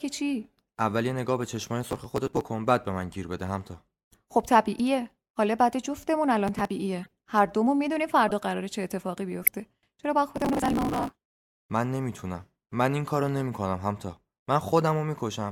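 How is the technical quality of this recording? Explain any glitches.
The speech is marred by two recurring glitches. Processor overload crackle at 1.84–2.41 s, 6.47–6.71 s and 10.36–11.31 s: the processor missed dozens to over a hundred buffers of around 5 ms in a row, each skipped outright, so the hard-edged gaps build into gritty tearing. Corrupt frame decoded at 4.79 s, 7.03–7.10 s, 8.28–8.31 s and 9.42–9.48 s: damaged compressed frames were played anyway, putting energy at the wrong frequencies as brief chirps or noise blips.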